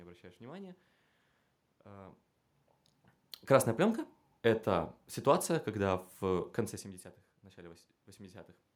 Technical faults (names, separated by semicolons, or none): none